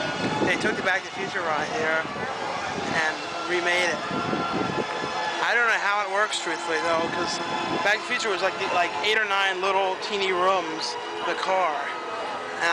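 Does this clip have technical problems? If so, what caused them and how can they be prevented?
No, nothing in this recording points to a technical fault, so there is no cause to trace and nothing to prevent.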